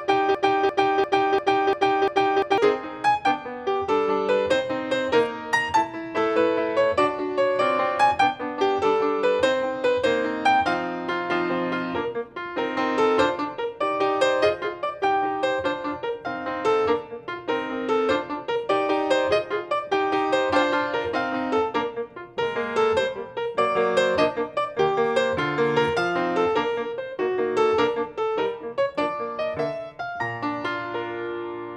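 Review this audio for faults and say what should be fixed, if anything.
A stall in the player, encoder or stream likely left it resending its last held fragment, producing a broken-record loop from 0.00 to 2.58 s. The loop is already under way when the audio begins: a 0.35 s piece repeats exactly, back to back, six times, and whatever should have played there is lost. To prevent it, have the playback or streaming chain output silence or resynchronise on a stall rather than repeating its buffer.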